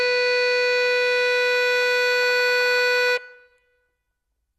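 MP2 compression throughout the music: nothing above 12.2 kHz, with a dull, gurgling graininess, likely from bit-starved upper sub-bands, fitting about 64 kbps.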